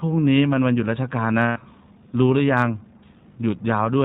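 Throughout, iLBC codec coding bands the speech below 4 kHz, sounding rough and synthetic, consistent with 15.2 kbps 20 ms frames; spectrograms show nothing above 4 kHz.

From 1.42 to 1.58 s, lost iLBC frames leave a held, buzzy vowel as the decoder loops the last pitch cycle with noise; the waveform shows repeating, fading periods.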